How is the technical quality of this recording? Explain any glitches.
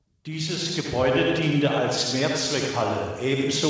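There is one glitch, an automatic gain rise near the start. The sound has no content above about 8 kHz, which points to a wideband call codec such as G.722 somewhere in the path.

From 0.25 to 1.48 s, the automatic gain rises. The gain control judged the input too quiet. It raised its gain step by step, by about 5 dB in total. The speech and the background noise swell together across that stretch of just over a second.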